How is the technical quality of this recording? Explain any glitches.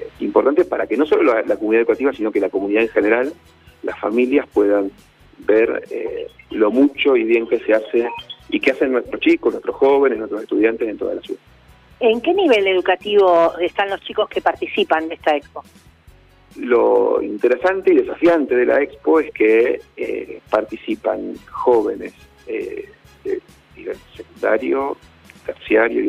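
No technical glitches can be heard anywhere in the recording. There is nothing to explain, since no audible fault turns up at any point.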